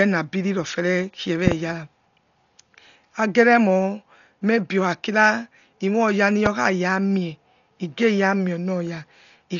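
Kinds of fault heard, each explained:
Dolby Digital compression: The speech was likely passed through a Dolby Digital encoder starved of bits, so many frequency lines were left without mantissa detail and refilled with dither noise at decoding. The damage is heavy: nothing survives above 6.9 kHz, which leaves the speech dull and muffled, and a rough, fluttering hiss clings to voiced sounds throughout. That degree of loss fits a stream of around 40 kbps.
Loud pop: A sudden voltage step or spike, likely from a switch, plug, static discharge or driver glitch, was added on top of the signal, and the following circuitry shaped it into sharp transients. At 1.47 to 1.54 s two pops arrive in quick succession, and a single pop follows at 6.46 to 6.49 s. Each stands roughly 15 dB above the speech, which carries on unbroken underneath.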